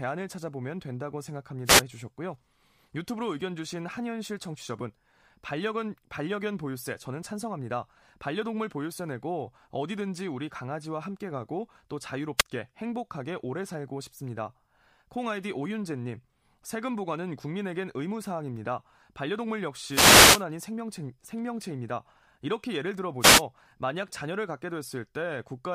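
Wireless microphone noise hits break into this speech at 1.65–1.82 s, 12.37–12.43 s, 19.9–20.44 s and 23.2–23.43 s: bursts of static as the microphone's radio signal fades and receiver noise swamps it.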